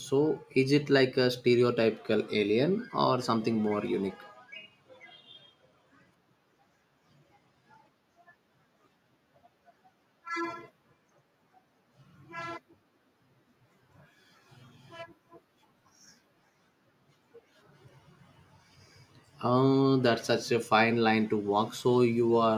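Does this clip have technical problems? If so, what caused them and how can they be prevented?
Yes, there's one: a case of dropped samples at 3.88 s in this speech clip. You hear a single sharp click, and on a spectrogram it's a thin vertical line. Only a tiny fraction of a millisecond goes missing, far too little to lose any of the speech, but the waveform jumps straight from one value to a later one, and that sudden step is the click. It's likely down to the capture or playback buffer briefly failing to keep up. To prevent it, give the audio path a bit more buffer headroom and keep other load off the machine while recording.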